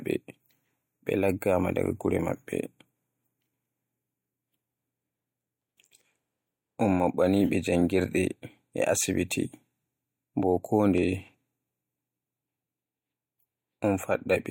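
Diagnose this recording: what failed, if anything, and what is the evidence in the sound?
This is a driver or buffer-stage failure: periodic USB or driver dropouts. Right after "ɓe janngirɗe e asibiti", from about 9.97 s to 13.98 s, ticks land once a second in the speech. Something stalls the bus each second, and well under a millisecond of audio gets skipped each time.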